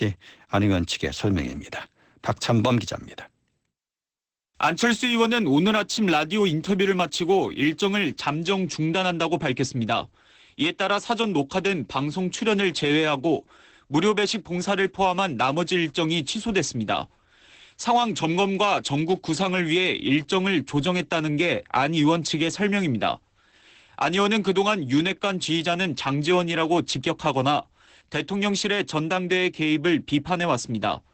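A speech recording carries Opus voice compression from start to finish. Nothing sounds above about 8.5 kHz, and the voice has the muffled, slightly hoarse and robotic quality of the SILK linear-prediction coder, which fits a low rate of around 12 kbps with 20 ms frames. A plain low-pass filter would dull the top end but leave the voice smooth. Here the coarse coding of the excitation adds a grainy, synthetic texture. From 0 to 8.2 s there is also sample clock jitter. The converter's clock wanders by a couple of microseconds, so each sample is taken slightly early or late, and the error sits roughly 35 dB below the signal. It is heard as a fine hiss or roughness riding on the voice. Unlike steady background noise, it swells on loud and bright sounds, where the waveform changes fastest, and disappears in the pauses. It also stops after 8.2 s, while the codec damage continues.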